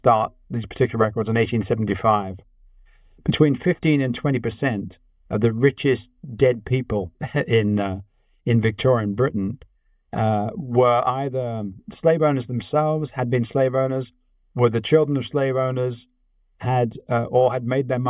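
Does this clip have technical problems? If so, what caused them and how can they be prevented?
No, this clip has no technical problems, so there is nothing that caused them and nothing to prevent.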